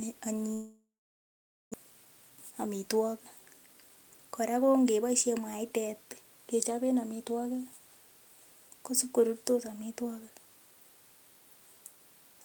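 It's a speech clip, and right near the start, from 0.53 to 1.76 s, the sound stops flowing and what's there is a fading continuation of the last bit of audio that then drops to silence for most of that stretch (about 0.88 s of it). When it resumes, roughly a second of material is simply gone. That's most likely a long network dropout: nothing arrived, the receiver stretched out what it had, then gave up until packets returned. The jump left the playout a couple of tenths of a second behind where it should be. Right after that, the receiver works that backlog off with a jitter buffer speed-up. From 1.84 to 2.66 s it runs at 107% speed, then from 3.67 to 4.51 s at 113%, just before "ko ng'eboishen mwaitet kechoben". It's snipping out tiny pitch-period-sized chunks over and over, trimming around 70 ms and then about 100 ms. The pitch stays put, but the speech sounds noticeably rushed in those spots.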